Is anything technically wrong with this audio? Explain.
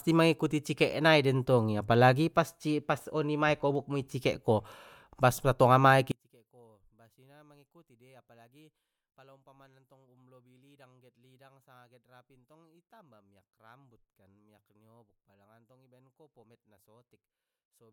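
Yes. From 6.12 s to the end of the clip, the speech collapses by about 35 dB to a faint residue. The likely cause is one channel inverted: with one stereo side in reversed polarity, everything common to both channels, including the centred voice, cancels when they are summed to mono. Unlike a dropout or a gain fault, the sound doesn't go silent or simply get quieter. A low-level trace of the channel differences remains.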